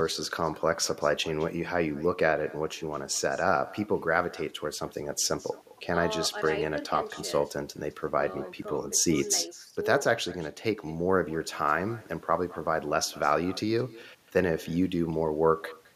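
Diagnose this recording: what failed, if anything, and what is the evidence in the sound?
Call processing failed: this is echo with no canceller. The far end played the call over a loudspeaker, its microphone picked that playback up, and nothing subtracted it before sending it back. Throughout the speech, every phrase is followed roughly a fifth of a second later by a second copy about 21 dB quieter. That copy sounds thinner because it has passed through a loudspeaker and a room before returning over the network.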